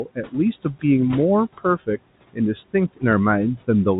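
Right at the start, between 0.05 and 0.34 s, you get speech cut by the noise suppressor: it mistook some of the opening sound for noise and pulled it down by up to about 15 dB, so roughly a tenth of a second comes out swallowed and faint.

All the way through there are noise suppressor artifacts too. The room noise, sitting about 20 dB under the speech, gets ducked by about 18 dB in the gaps and comes back under the talking.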